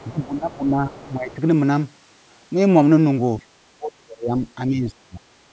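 A short speech recording passed through call microphone processing, with nothing above 8 kHz, carries two echo-canceller faults. The other side's voice leaking through appears as a faint second talker from 0.00 to 0.54 s, 0.95 to 1.14 s and briefly at 1.30 to 1.35 s, sitting roughly 25 to 30 dB below the main speech. This is likely residual loudspeaker echo that the canceller failed to subtract from the microphone signal, leaving fragments of the far end audible under the near talker. Speech suppressed in double talk shows as the near talker dipping from 0.09 to 0.96 s, 1.17 to 1.39 s, 3.77 to 4.43 s and 4.67 to 5.22 s. The shallowest drops are around 10 dB and the worst, near 3.8 to 4.4 s, is around 35 dB. When both ends talk at once, the canceller likely cannot separate the local voice from the echo and attenuates everything together.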